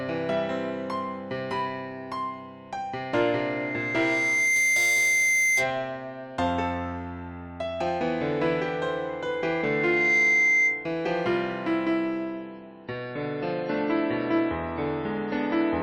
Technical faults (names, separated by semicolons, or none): loudspeaker feedback squeal; adaptive stream at a lower bitrate